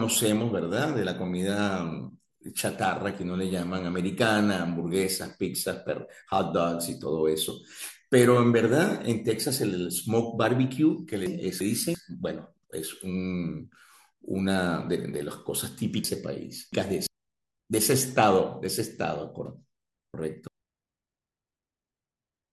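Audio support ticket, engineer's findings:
Chunks out of order in the buffering/write path. About 341 ms blocks land late: one chunk late at 11.26–11.95 s, two late at 16.04–17.07 s and 19.46–20.48 s. Speech jumbles briefly, with three hard joins at each.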